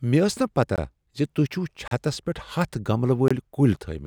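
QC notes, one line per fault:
0.76 s: block of digital silence, about 20 ms where the sound drops out with no fade, so a short hole rather than a softened dip.
1.88–1.91 s: block of digital silence, a 35 ms hole with abrupt edges, silence rather than a muffled gap or repeated sound.
3.28–3.31 s: block of digital silence, a 23 ms gap that fits a 1024-sample buffer not filled in time; abrupt edges distinguish it from a faded dropout.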